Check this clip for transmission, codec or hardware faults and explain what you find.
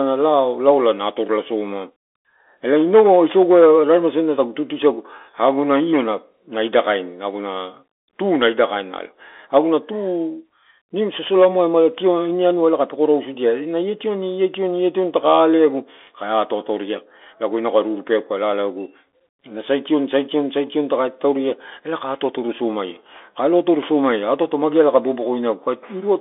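One fault runs through the whole clip, from start to finish: the Bluetooth CVSD headset codec. CVSD sends each sample as a single up-or-down bit and keeps adjusting its step size, which fits a 64 kbps headset link. The line passes only about 300 Hz to 3.5 kHz, with nothing above 3.8 kHz, so the speech sounds thin and boxed in. Loud, fast high content outruns the step and distorts, s sounds come out scratchy, and a grainy hiss sits beneath the speech.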